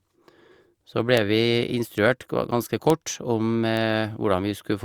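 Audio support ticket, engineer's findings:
Bit error spikes at 1.17, 1.98, 2.90 and 3.77 s in the speech. Isolated sharp ticks, broadband and unrelated to the signal, peaking at about -7, -19, -7 and -13 dBFS. Probable flipped bit in memory or on a digital link, a power-of-two jump lasting only a sample or a few.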